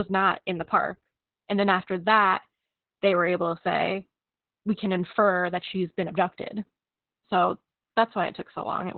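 From start to finish the speech carries heavy Opus voice compression: nothing survives above about 4.4 kHz, so it sounds narrowband and muffled, and the coarse linear-prediction coding leaves it hoarse and a bit robotic, which points to a very low bitrate, around 8 kbps.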